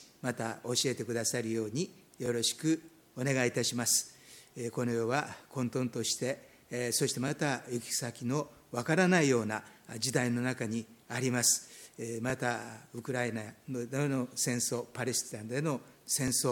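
A brief stutter interrupts the sound at 2.26 to 2.28 seconds, and the same hitch returns at 12.30 to 12.32 seconds, each time a tiny skip-back that reads as a click. These are overlapping chunks. The audio was handled in blocks of 5 seconds, and each new block began before the previous one had finished, so at these joins about 20 ms of sound plays twice.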